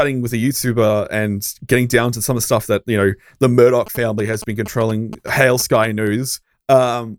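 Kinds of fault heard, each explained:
GSM signalling bursts: a nearby 2G phone is sending short groups of radio bursts while signalling, and the audio circuit rectifies them. Just after "that you know the", from 3.87 to 6.08 s, there's a galloping dit-dit-dit of 217 Hz buzz, well below the speech.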